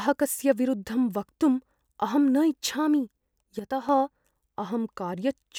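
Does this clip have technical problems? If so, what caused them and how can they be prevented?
Yes. From 3.59 to 3.89 s the speech level falls abruptly by about 6 dB, then recovers. The likely cause is one channel dropping out, halving the mono sum. Prevention: secure stereo cabling and connectors, and monitor both channels during recording.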